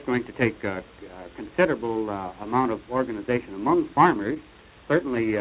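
At 4.34 to 4.38 s, short concealed packet loss: about 20 ms of audio went missing and the receiver extrapolated over the gap, leaving a brief smear before the sound resumes, through a narrowband call path with nothing above 4 kHz.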